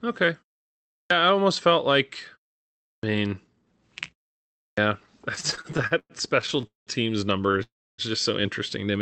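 At 1.00 s, 2.91 s and 4.66 s, each after a pause of about 0.6 s, there is a clipped start after a pause. The output device appears to drop into a sleep state during the quiet and needs time to wake, so the first 0.10 s, 0.12 s and 0.11 s of sound are lost. Speech enters abruptly, missing its opening sounds. On a waveform the envelope jumps from flat to full level with no onset ramp, and the spectrogram shows energy starting with a hard vertical edge.

From 5.35 s to 6.90 s there are repeated stalls (stutter): 16 separate gaps in about 1.5 s. Packets arrived late or too slowly for playback, so the jitter buffer kept running dry. Each time, the receiver stretched the last sound until data arrived. About a third of that span, roughly 0.51 s in total, is concealment, and the longest hold is 198 ms. Nothing is lost, but the speech drags and judders. The spectrogram shows repeated stretches of smeared, flat harmonics, and the longer ones fade in level on the waveform.

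At 7.52 s a short stall from a late packet holds the current sound for about 20 ms while the buffer waits, and then playback resumes from the same point. It is heard as a tiny hitch or faint buzz. On the spectrogram it appears as a brief horizontal smear, often with a slight dip in the waveform envelope.

From 7.63 s to 8.01 s there is a call audio freeze, just before "just so interesting". The likely cause is packets held up in the network long enough to empty the jitter buffer. The receiver continues the last sound as a fading buzz, then leaves about 280 ms of silence before the speech resumes where it stopped, after 355 ms of inserted time. Nothing is skipped, but a clear gap opens in the speech. On the waveform, a decaying tail runs into a flat line, and in the spectrogram a smeared band fades to blank.

Throughout, the Opus call path limits the spectrum to a ceiling around 8 kHz, consistent with a bitrate near 32 kbps.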